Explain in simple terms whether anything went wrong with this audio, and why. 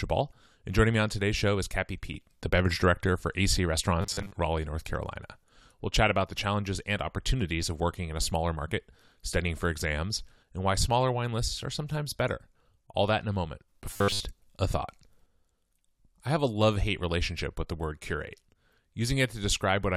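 Twice the speech turns into a stiff, metallic buzz at a steady 100 Hz, from 4.01 to 4.31 s and from 13.91 to 14.21 s. This is robotic sound from repeated short buffers, likely caused by audio arriving too slowly, with a 10 ms scrap repeated in place of most of the missing sound.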